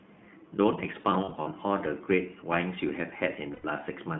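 Speech heard through the iLBC codec. The band runs only from 150 Hz to 3.5 kHz, and voices sound rough and synthetic, which fits 20 ms frames at about 15 kbps. Lost iLBC frames appear from 1.02 to 1.48 s as brief buzzy held-vowel patches, the longest a few tens of milliseconds, and again from 3.52 to 3.66 s, with 120 ms lost. The decoder repeats the last pitch cycle with noise, and the speech recovers at once.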